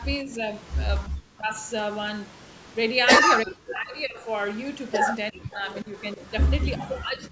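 The speech dips and breaks up at 0.24, 1.09, 3.44, 5.31, 5.83 and 6.76 s, the deepest gaps nearly silent. This is likely speech suppressed in double talk, where an echo canceller confuses the talker with loudspeaker echo.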